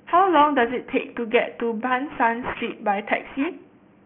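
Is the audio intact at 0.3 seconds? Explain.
No. Aliasing runs throughout, including 0.3 s. The rate dropped from 16 kHz to 6 kHz unfiltered, so content above 3 kHz folds back, making sibilants gritty and metallic.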